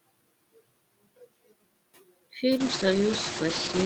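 From the start, the background between phrases sinks away and rises again under the speech. These are noise suppressor artifacts: the suppressor pulls down, by about 20 dB, the frequency bands it judges to be steady noise, frame by frame, leaving uneven remnants behind.

Just after the room noise swells by about 16 dB at around two and a half seconds, the sound turns rough, watery and muffled from 2.58 s through the end of the clip, 1.28 s in all, with nothing above 8 kHz. This is a call bitrate drop, which fits the encoder being pushed from about 64 kbps down to 10 kbps and narrowing its audio band from 20 kHz to 8 kHz.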